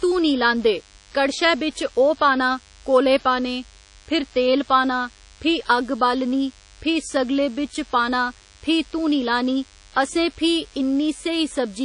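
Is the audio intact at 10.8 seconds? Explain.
No. At 10.8 seconds the speech carries DECT cordless phone buzz, present throughout the clip. A nearby DECT handset or base is firing a radio burst every 10 ms that the audio circuitry rectifies, so a thin, steady 100 Hz buzz rich in harmonics sits roughly 30 dB below the speech.

The same moment also has plainly audible coding damage that likely comes from WMA compression. Long transform blocks smear quantisation noise over tens of milliseconds, and weak spectral lines are dropped, which fits a low bitrate of around 32 kbps. The speech sounds ringing and washy, with hiss pumping alongside it and nothing above 10.1 kHz.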